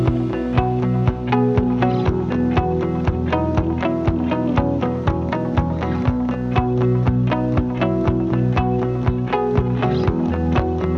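No technical faults can be heard anywhere in the audio; the signal holds steady throughout, with nothing interrupting or disturbing it.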